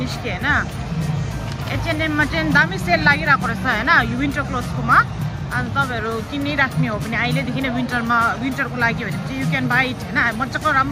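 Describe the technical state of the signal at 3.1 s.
At 3.1 s the signal is intact, with no audible fault at that point.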